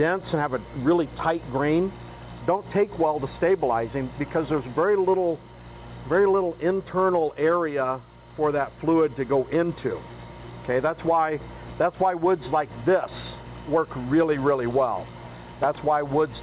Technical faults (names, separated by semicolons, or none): none